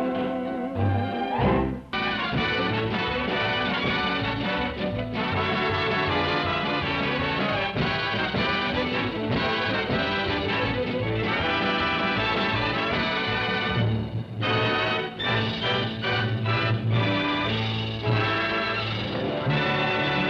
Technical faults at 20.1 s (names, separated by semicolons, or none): none